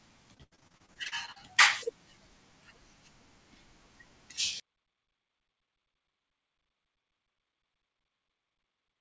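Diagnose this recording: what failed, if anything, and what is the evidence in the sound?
Repeated packet loss in the network from 0.34 to 1.38 s: fifteen holes up to 81 ms, each patched by repeating prior sound, leaving choppy, robotic speech.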